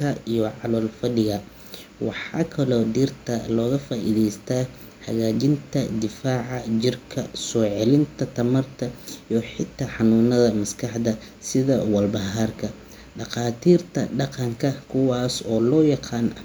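No technical faults can be heard anywhere in the speech recording, which stays steady and continuous throughout.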